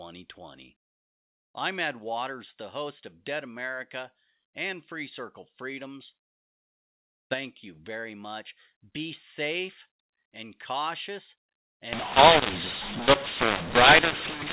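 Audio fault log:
11.93–14.53 s, mu-law and A-law mixed up: the G.711 mu-law telephone stream gets decoded with the A-law table, so sample levels are remapped wrongly, some too large and others too small. The speech turns harsh and distorted, and the quietest samples rise well above silence as noise.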